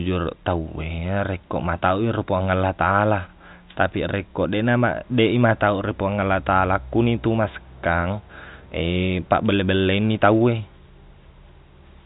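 No faults can be heard anywhere in this speech.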